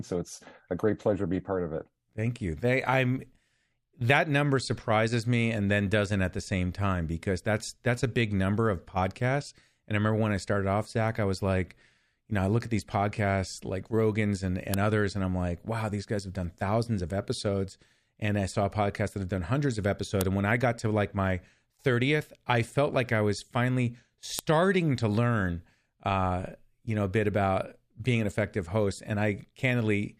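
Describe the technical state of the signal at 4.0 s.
At 4.0 s the audio is intact, with no technical fault present at that moment.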